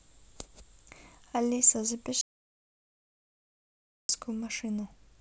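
Speech, with an audio dropout to silence from 2.21 to 4.09 s. The signal cuts off mid-flow and returns abruptly after 1.88 s of silence, likely from a lost input link. Unlike a noise gate closing, there is no release tail or residual room tone.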